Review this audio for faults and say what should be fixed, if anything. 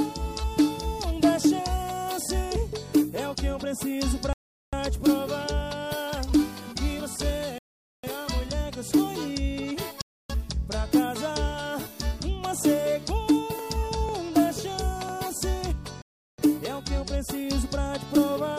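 The audio goes fully silent at 4.33 to 4.73 s, 7.58 to 8.04 s, 10.02 to 10.30 s and 16.02 to 16.39 s, then resumes. This is likely a Bluetooth stall: interference delayed packets until the headphone buffer emptied. Long, irregular gaps set it apart from clicks. Reduce interference or keep the headphones closer to the phone.

Between 13.09 and 15.09 s, roughly five brief ticks fall every 0.5 s. These are periodic USB or driver dropouts, where a scheduled background task stalled the bus and about a millisecond of audio was skipped each time. Strict regular spacing and tiny losses distinguish them from stalls. Disable the interfering background task or update the audio driver.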